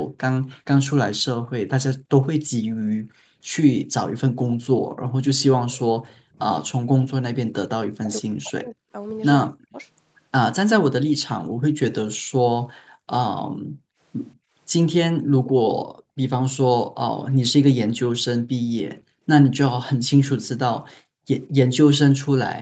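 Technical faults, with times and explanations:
0.48–3.41 s, 4.36–5.14 s, 12.66–16.17 s, 18.95–19.23 s and 20.94–21.27 s: background gated by the echo canceller. The room tone drops by up to about 40 dB while the far end plays, then comes back.
5.73–6.21 s: echo leak. A faint copy of the voice trails about 190 ms behind, around 25 dB down, likely residual loudspeaker pickup that the canceller missed.
6.33–9.76 s: speech suppressed in double talk. The talker dips hard, up to about 40 dB, for roughly a second and a half in total, likely because the canceller clamped down while both sides spoke.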